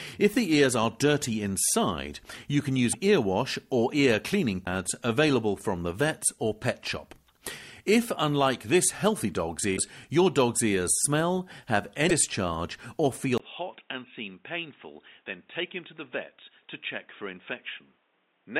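At 2.92 to 2.95 s, 4.65 to 4.67 s, 9.76 to 9.78 s and 12.09 to 12.11 s, the sound jumps ahead with a brief glitch lasting about one 24 ms frame. These glitches are likely a broken MP3 bit reservoir. After frames are lost, the next frame reaches back for borrowed data and decodes bytes from the wrong frame, producing a short spurt of noise or chirp instead of the missing material.

At 13.38 s there is a 20 ms silence, and from there to the end the input switched to a poorer device, likely a different microphone or a headset's call profile. Nothing above 3.8 kHz passes, so the sound turns dull and boxy. The level drops by roughly 10 dB, and a new background noise sits around 35 dB below the signal.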